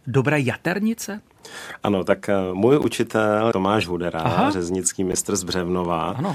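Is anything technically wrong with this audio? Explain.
Yes. Corrupt frames decoded appear at 2.82–2.85 s (just after "tak eh můj"), 3.81–3.84 s and 5.12–5.15 s. In each, a single damaged compressed frame was decoded anyway, so misread data put energy at the wrong frequencies. The result is a brief 30 ms chirp or burst peaking around −10 dBFS that cuts across the speech.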